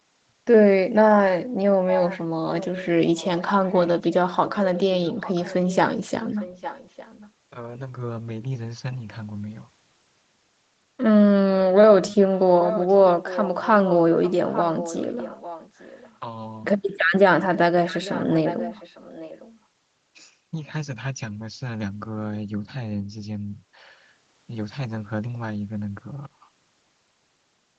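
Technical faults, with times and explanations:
12.01–16.17 s and 17.54–19.57 s, echo leak: the speech repeats 0.85 s late, about 10 dB then 15 dB quieter, likely loudspeaker echo the far end's canceller missed.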